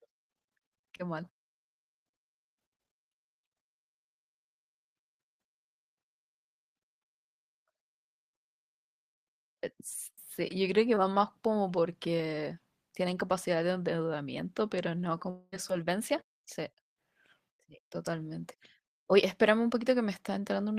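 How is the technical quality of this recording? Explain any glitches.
The recording has three network glitches: two brief concealed packet losses and one longer gap that sounds like a dropout.

At 0.97 to 1.01 s and again at 10.95 to 10.98 s, there is short concealed packet loss. About 20 ms of audio failed to reach the decoder in time on each occasion. The receiver patched the hole by extending the preceding sound, covering the full 20 ms the first time and 14 ms the second, then crossfaded back into real audio. Each patch is heard as a brief smear or wobble in the speech.

From 15.30 to 15.54 s, the cause is likely a long network dropout, with about 220 ms of audio lost in transit. The receiver filled that stretch by continuing the last sound as a synthetic tail that fades out, leaving about 20 ms of silence before the speech resumes further on. The lost portion never returns, so the speech picks up past it.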